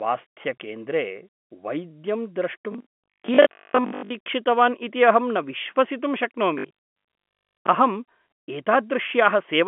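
Speech over a G.711 phone line, so nothing above about 3.7 kHz, and from 2.72 to 4.12 s it collapses into robotic sound from repeated short buffers. The voice goes rigid and metallic, with a 50 Hz buzz, which fits a 20 ms chunk being replayed over and over. Most of that stretch seems to be repeats rather than fresh audio. The likely cause is new packets arriving too seldom, with the player looping the last buffer while the real audio is skipped.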